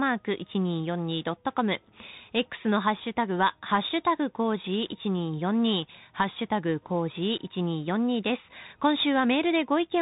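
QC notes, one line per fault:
Throughout: Bluetooth CVSD headset codec. The speech has been carried over the narrowband headset link, where each sample is coded as a single up-or-down step whose size adapts, which fits a 64 kbps CVSD stream. Nothing above about 3.8 kHz survives, so the speech sounds boxed in and telephone-like. Where loud high-frequency energy moves faster than the step can follow, it distorts, s sounds turn scratchy, and a granular hiss sits underneath the speech.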